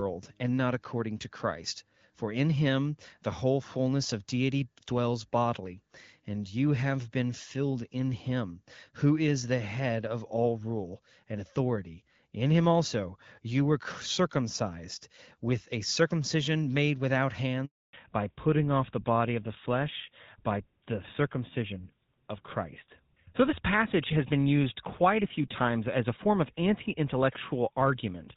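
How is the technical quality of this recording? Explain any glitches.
The recording has two linked faults partway through, both typical of a mobile call changing networks. Before them, the wideband HD Voice coding is audible only as light codec colouring, consistent with AMR-WB at 12.65 kbit/s.

Handover gap, 17.65 to 17.93 s: right after "a circumcision made without", the speech cuts out for about 280 ms. The phone was moving the call to a different network, and no speech frames reached the far end while the link switched over. The sound drops away quickly and stays silent until the new connection picks up. Whatever was said in that window is gone.

Fallback to narrowband, from 17.93 s to the end: when the sound returns, it has lost all content above 4 kHz. The call stepped down from HD Voice to an older narrowband codec; the result points to GSM full rate at 13 kbit/s. Sibilants and breath lose their crispness, and the speech sounds duller, boxier and rougher than in the first part of the recording.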